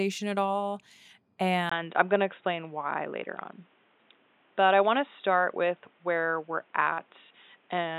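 At 1.7 s there's a 20 ms gap, and from there to the end the speech goes dull and boxy, with nothing above 3.8 kHz, a faint new noise floor well below it, and level roughly unchanged. That's likely the input switched to a poorer device.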